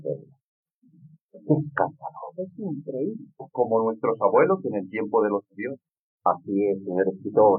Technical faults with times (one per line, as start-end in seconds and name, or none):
none